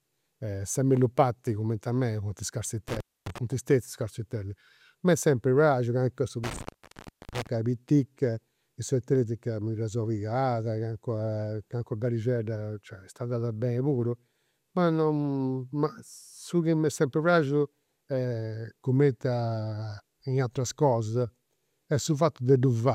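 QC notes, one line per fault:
2.89–3.38 s, intermittent contact: just after "cumenti a mei funt" the signal drops out for about 260 ms, framed by crackle as a loose plug or cable breaks and remakes contact. Faint hiss remains during the gap, so the line opened rather than the audio being muted digitally.
3.52–3.68 s, DAB burbling: a short burbling patch sits over the speech, which fits roughly a dozen corrupted MP2 frames from weak reception. Unlike a contact fault, the programme never goes silent and there is no crackle.
6.44–7.47 s, intermittent contact: a longer break, with about 0.67 s of open line inside a crackly stretch as the connection stutters before and after the gap. Faint hiss is heard while the line is open. The edges are clicks, not the chirping texture of bit errors.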